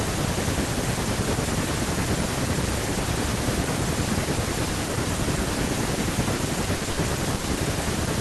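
Around 6.35 to 6.41 s and again at 6.77 to 6.83 s there's short concealed packet loss. About 40 ms of the speech never made it to the decoder, and the receiver patched each hole by carrying the last sound forward before blending back in. You hear a quick smear or wobble. Then come two bursts of packet loss, at 6.91 to 6.99 s and 7.35 to 7.45 s. There the concealment stretched over 60 and 80 ms of missing audio, fading the carried-over sound into a held buzz or hiss before the speech picks up further along, with that stretch simply gone.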